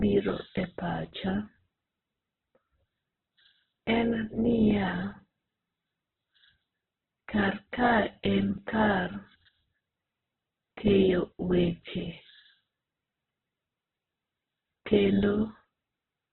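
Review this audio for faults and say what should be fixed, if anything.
The speech is damaged throughout by what is likely Opus compression. Nothing is heard above about 4.2 kHz, so the sound is narrowband and dull. Voiced sounds turn grainy and rough rather than swirly. When the encoder runs short of bits, it fills upper bands with noise or copies of lower ones, so harmonics lose their clean shape. The heavy damage points to a very low rate, around 8 kbps. To prevent it, encode from the original at a much higher bitrate with full bandwidth.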